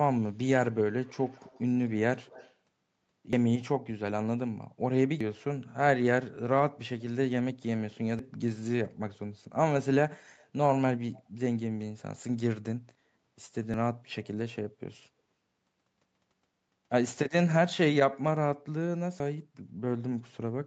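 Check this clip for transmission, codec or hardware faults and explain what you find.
Two kinds of fault are present in this speech: a faint echo leak and repeated dropped buffers.

Echo leak at 1.04–1.62 s, 2.24–2.54 s and 11.16–11.23 s: a faint copy of the voice trails it by 145 ms, very quiet, roughly 25 to 30 dB down. This is likely a far-end loudspeaker echo that the canceller missed. On a spectrogram it appears as a weak, shifted duplicate of the speech harmonics.

Dropped buffer (overrun) at 3.33, 5.21, 8.19, 13.74 and 19.2 s: each is a jump where the sound skips ahead, losing about 100 ms, or 150 ms at 5.21 s. This is likely samples that were overwritten before they were read. The waveform shows an abrupt discontinuity with no gap, and the spectrogram shows a thin vertical broadband line.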